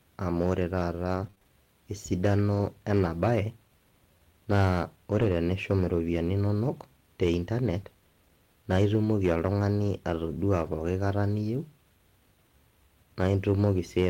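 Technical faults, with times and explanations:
Throughout, hard clipping: the speech is driven about 7 dB past full scale, so roughly one percent of samples are cut flat, adding crackle on loud syllables.
1.15 to 10.68 s, scattered short gaps: about five brief packet losses, each up to roughly 20 ms, patched by extending the preceding sound, leaving small ticks and hiccups.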